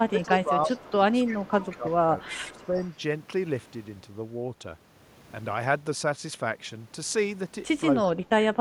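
Speech suppressed in double talk runs from 0.03 to 0.97 s and again from 1.29 to 2.81 s. The voice dips by up to about 15 dB, most likely because an echo canceller, faced with both sides talking at once, attenuated everything. Echo leak overlaps it at 0.21–0.35, 0.66–0.87, 1.26–1.94 and 2.26–2.94 s. A faint delayed copy of the voice, 335 ms late and about 20 dB down (about 15 dB down in the last stretch), slips through, likely from loudspeaker pickup the canceller failed to remove. A brief leak at 7.99–8.06 s, about 25 dB down, leads into a final suppression from 8.06 to 8.6 s, where the voice drops by up to about 25 dB.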